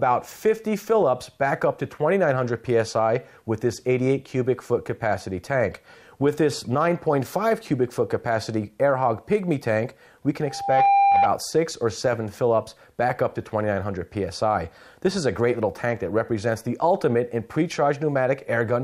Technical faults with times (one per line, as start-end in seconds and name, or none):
10.45-11.30 loudspeaker feedback squeal